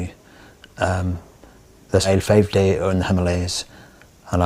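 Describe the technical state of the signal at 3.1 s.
At 3.1 s the receiver's jitter buffer has built up more audio than its target and is cutting it back, a jitter buffer speed-up running from 2.13 to 4.25 s. Short stretches of a pitch period or so are dropped repeatedly, removing roughly 0.3 s in total. The sound plays about 12% fast at unchanged pitch, so it comes across as hurried.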